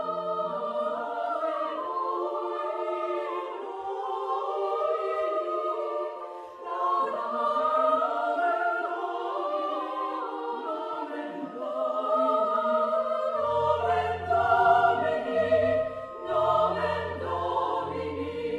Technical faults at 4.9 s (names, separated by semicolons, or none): none